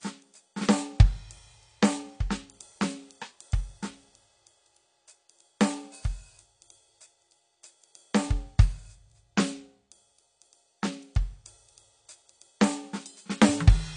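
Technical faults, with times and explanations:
Throughout, AAC compression: the music sounds dull and smeared, with nothing above 9.8 kHz and a plainly audible warbling, fizzy texture on sustained tones. The likely cause is AAC-LC coding at a low rate, which fits a bitrate around 32 kbps. With so few bits for each frame, the encoder drops the top band entirely and quantises the rest coarsely, leaving gaps and substitute noise that shift from frame to frame.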